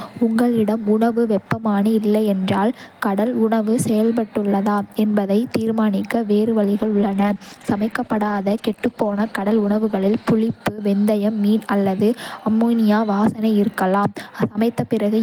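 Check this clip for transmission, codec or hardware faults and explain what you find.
One fault stands out: a call bitrate drop from 6.81 s to 10.63 s. The call's bandwidth estimate fell, so the encoder had to spend far fewer bits on each stretch of speech, coding it coarsely and trimming the upper frequencies. For almost four seconds the speech turns muffled and watery, consistent with a fall from around 32 kbps to about 13 kbps. Unlike packet loss, there are no gaps, clicks or robotic repeats, just a steady degradation that then clears.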